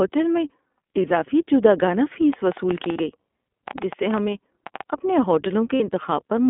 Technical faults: iLBC codec; lost iLBC frames; train of clicks

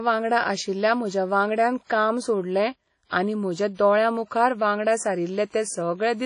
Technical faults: WMA compression; pre-echo

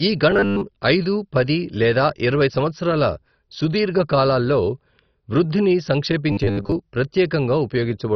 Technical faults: MP2 compression; robotic sound from repeated short buffers

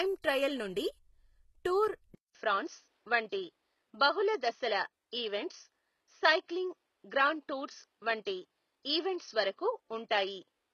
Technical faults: low-bitrate audio saved at a high bitrate; input switched to a poorer device

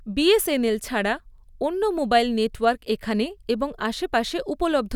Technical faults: none

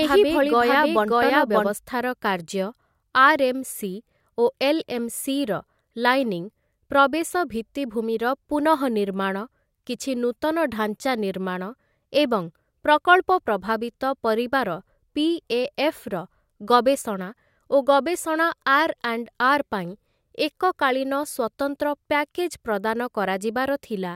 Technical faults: doubled audio track

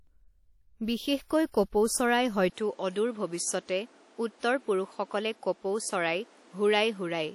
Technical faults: WMA compression; pre-echo; input switched to a poorer device

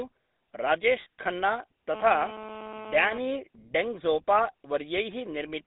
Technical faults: GSM full-rate codec; lost GSM frames

